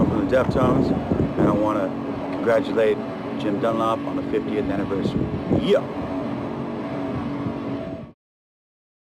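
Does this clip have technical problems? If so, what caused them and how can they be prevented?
No, there are no technical problems to report here.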